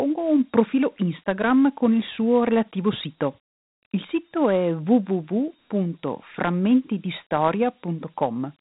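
Dialogic VOX ADPCM, throughout: coarse 4-bit step coding, consistent with 32 kbps, leaves a plainly audible gritty hiss following the speech and nothing above 3.8 kHz.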